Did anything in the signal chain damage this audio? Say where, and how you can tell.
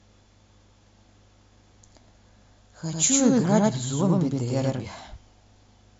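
Yes. From 2.93 to 4.85 s the speech carries a doubled audio track: a full-band copy roughly 100 ms behind, at about equal level, likely a second, slower capture path. The waveform shows every burst repeated, the spectrogram a shifted duplicate, both starting and ending abruptly.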